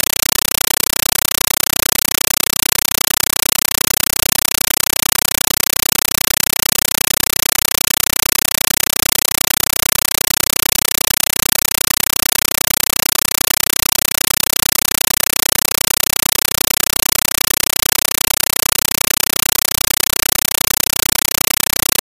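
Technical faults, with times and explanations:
Throughout, compressed stream played as audio: in place of any program sound there is harsh, very loud static that chatters at a steady 31.25 Hz, each burst lasting about 8 ms and followed by silence. A Dolby Digital (AC-3) bitstream, which fits a 384 kbps encode, is being treated as raw samples instead of decoded, so every data frame becomes a noise burst with zero padding. That rigid frame rhythm separates it from steady hiss or random digital corruption.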